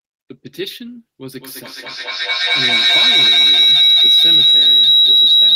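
From 1.34 s to the end, feedback howl takes over the speech: a microphone-to-loudspeaker loop gains level each pass, so repeats grow and narrow to a shrill tone around 4 kHz, with repeats roughly every fifth of a second and peaking about 18 dB above the speech.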